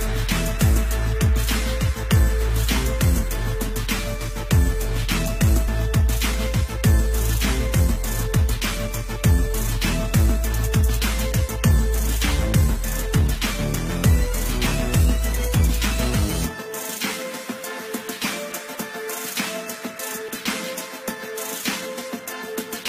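At 5.67 s, 18.74 s and 20.27 s the audio jumps forward, a symptom of compressed frames skipped: whole frames never reach the output, either missing from the file or rejected by the decoder as damaged. The gaps are roughly 70, 50 and 100 ms, consistent with losing a few 23.2 ms frames each time.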